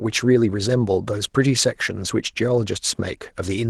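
A speech recording with no technical faults to report.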